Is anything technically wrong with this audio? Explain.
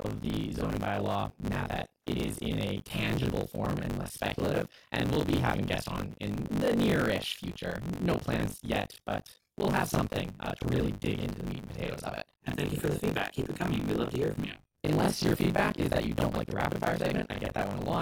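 Yes. Buffer tearing runs throughout the speech: writer and reader have slipped, so roughly 40% of each 20 ms period replays audio about 40 ms old, producing a 50 Hz robotic buzz.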